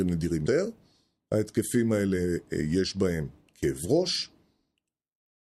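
Compressed frames skipped at 0.46 s: the speech jumps forward by roughly a fifth of a second, as a short run of compressed frames was never decoded, either missing from the stream or rejected as corrupt. The gap fits about seven frames of 32 ms each, and the speech simply resumes further along.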